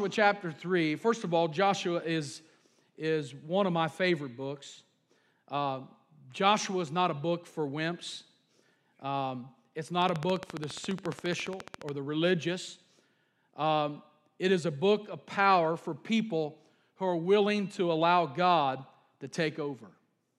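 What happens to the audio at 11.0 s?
At 11.0 s you're in the middle of a train of clicks running from about 10.02 to 11.90 s. It's roughly thirty evenly spaced ticks at 14.5 per second, poking up about 10 dB over the speech, likely from nearby equipment interference or a faulty connection or power supply.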